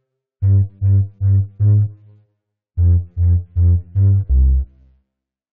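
At 4.29 s the music jumps abruptly ahead with a small blip, likely a stream segment skipped, where one failed segment left its stretch of programme missing.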